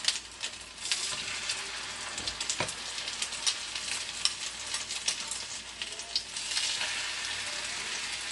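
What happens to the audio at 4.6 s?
At 4.6 s, as across the whole clip, MP3 compression is plainly audible: the watery, swirling texture points to a likely low bitrate around 48 kbps.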